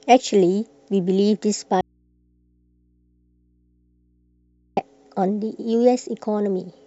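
At 1.81 s the speech cuts out abruptly in an audio dropout to a faint residue. For about 2.96 s, until 4.77 s, only mains hum remains, about 45 dB below the speech. The likely cause is a lost signal feeding a path that stayed live.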